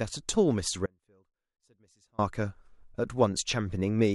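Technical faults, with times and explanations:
0.86–2.18 s: audio dropout to a faint residue. The speech cuts out abruptly for about 1.3 s and returns just as suddenly, with no fade at either edge. Through the gap only a faint trace of the signal remains, roughly 35 dB below normal level. That behaviour likely comes from the wanted feed being lost upstream while the downstream path stayed live, passing only leakage rather than true silence.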